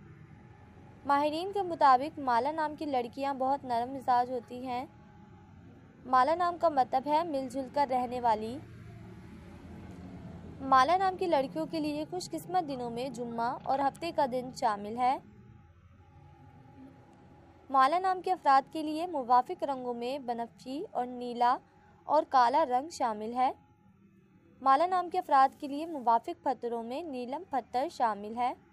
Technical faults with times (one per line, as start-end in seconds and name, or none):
none